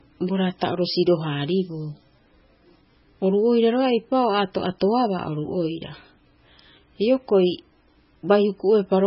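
From start to finish the speech has nothing above 5.5 kHz and a watery, swirling texture, with sibilants chirping metallically. This is likely MP3 compression at a very low bitrate, around 16 kbps. The encoder dropped the treble and switched weak frequency lines on and off between frames. A simple low-pass filter would dull the sound without that swirl.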